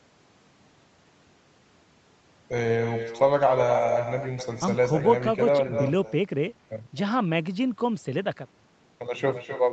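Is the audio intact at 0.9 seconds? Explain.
No, at 0.9 s you're hearing echo with no canceller, and it runs through the whole clip. The far end's loudspeaker feeds its microphone, so the speech comes back around a third of a second later as a thinner copy, about 7 dB down.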